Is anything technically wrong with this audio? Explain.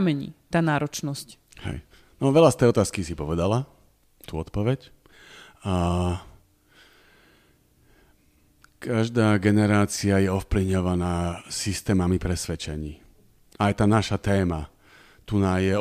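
No, nothing technically wrong can be heard in this speech recording. It holds steady throughout, with no interruption or damage to the sound at any point.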